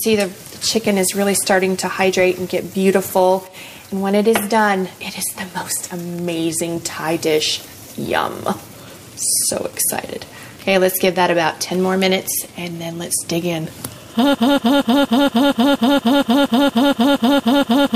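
At 14.35 s the audio falls into a broken-record loop that runs to the end of the clip. A fragment of about 0.23 s repeats back to back, identically, roughly 15 times, producing a rigid stutter at just over four cycles per second. This is likely a stalled player, encoder or stream re-sending the last block it held. Whatever should have played over those final 3.6 s is lost and replaced by the repeating fragment.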